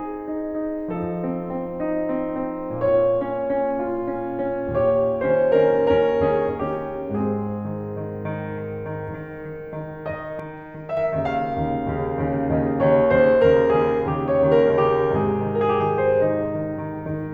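At 10.40 s the music and its background drop together by about 5 dB, recovering at 10.97 s: a sudden gain jump, likely an unramped digital gain change.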